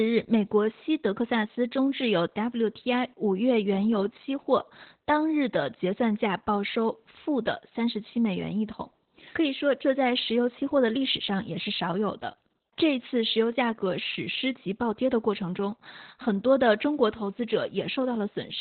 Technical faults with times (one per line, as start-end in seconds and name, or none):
0.00-18.60 Opus voice compression